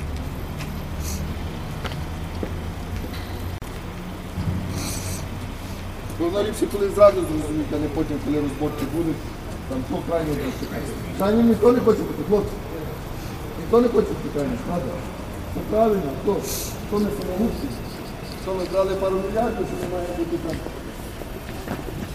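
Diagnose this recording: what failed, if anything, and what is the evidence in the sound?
A gap at a join of encoded pieces at 3.58 to 3.62 s opens a 37 ms gap in continuous sound. Separately encoded segments kept their encoder delay and padding. Smeared edges and seamless resumption rule out a network dropout.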